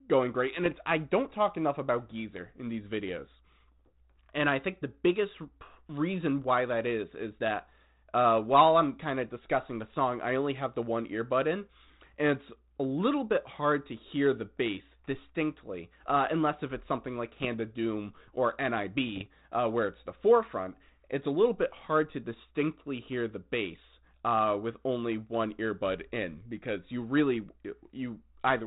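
Bit errors on an ADPCM link break into this speech clip at 0.64 to 0.75 s, between "going great and" and "I don't talk enough", again at 17.26 to 17.47 s after "unless if it's something", and at 19.08 to 19.26 s before "uh where it's the". Each flipped bit throws off the decoder's step size and prediction, so instead of a single click you hear a pop and a short rough burst with a jump in level. The telephone-band ADPCM coding underneath has the light grain that fits 32 kbit/s G.726.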